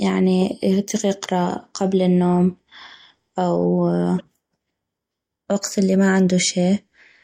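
At 4.17 to 4.21 s the speech is hit by damaged data in a compressed stream: corrupted bytes make the decoder misread frames and lose sync, producing a brief chirp, squawk, click or short hole. The waveform shows an abrupt discontinuity.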